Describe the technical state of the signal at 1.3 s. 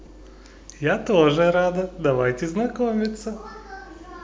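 At 1.3 s the speech signal is intact, with no audible fault at that point.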